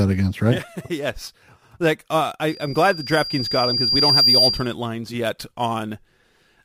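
Loudspeaker feedback squeal runs from 2.48 to 4.74 s, ending just before "lines yet". A microphone in this speech recording is hearing the loudspeaker it drives, and at 4.8 kHz the loop gain passes unity, so that frequency keeps feeding itself. It is heard as a thin, piercing tone that swells over about a second and a half until it sits roughly 10 dB above the speech, then stops.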